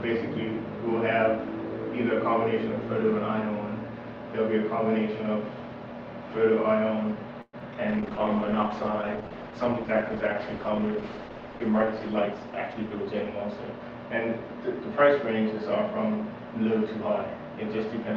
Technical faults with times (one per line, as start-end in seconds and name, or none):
7.41-7.55 call audio freeze
7.59-7.77 short concealed packet loss
7.89-14.34 call bitrate drop
12.24-13.80 jitter buffer speed-up